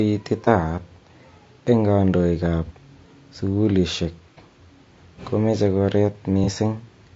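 Throughout the speech, the coding points to low-delay AAC compression, likely AAC-ELD at a bitrate around 32 kbps. Its short analysis frames cannot separate the pitch harmonics cleanly and leave too few bits for detail, so the voice has a plainly audible rough, grainy texture, with noise filling the gaps between harmonics and a thin, somewhat synthetic top end.

At 0.44 to 0.48 s, 2.66 to 2.71 s (just after "eng kandoik ab"), 4.34 to 4.38 s and 6.44 to 6.49 s, there is AAC frame loss with concealment. Each time about 30 ms of coded audio went missing, and the decoder patched the gap from the last good spectrum, with scrambled signs or interpolated energy. Each patch sounds like a brief smeared, noisy or phasey blur in the voice.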